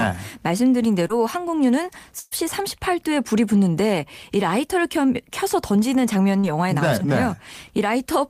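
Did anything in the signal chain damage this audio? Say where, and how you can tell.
Yes, the network stage. Short concealed packet loss occurred at 1.07 to 1.11 s, where about 20 ms of speech never arrived, and at 6.39 to 6.45 s, where 40 ms was lost. The receiver extended the preceding sound across each hole, so each spot carries a brief smear or wobble.

A burst of packet loss at 2.19 to 2.33 s removed 120 ms in one run. Concealment stretched the last sound across almost all of it and faded it out, producing a held buzz or dying hiss before the speech resumes with that stretch gone.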